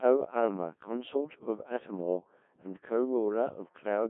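It's a speech clip run through the Codec 2 vocoder for its whole length, and the damage is heavy. The voice is rebuilt from sine waves using only pitch, voicing and envelope, so it sounds robotic and buzzy, squeezed between 150 Hz and 3.5 kHz, and the thinness fits a rate around 1.6 kbit/s.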